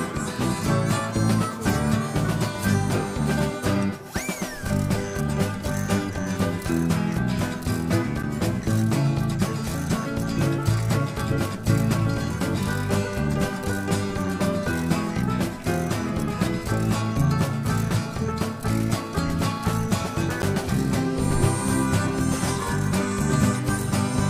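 At 8.23 s and again at 20.42 s, the output drops to a block of digital silence: runs of silence lasting about 8.7 ms and 11.6 ms. The second gap's length fits a 512-sample buffer that was not filled in time. The sound cuts out and back abruptly, and both gaps are short enough to be heard as brief ticks or dips.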